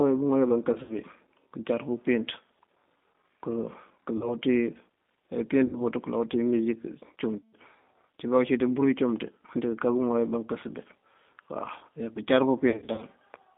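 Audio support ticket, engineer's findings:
G.729 codec throughout: band limited to about 200 Hz to 3.6 kHz, speech rough and synthetic. Cause: 8 kbit/s pulse-excited coding rebuilds the signal from a filter and sparse pulses.

VoIP packet loss concealed by the speech codec at 0.73–0.94, 4.17–4.35, 5.67–5.82, 7.39–7.53 and 12.70–13.05 s: buzzy, fading stretched tones covering 40–200 ms of gaps. The decoder extrapolates its last pitch and filter, and recovery lags after packets resume.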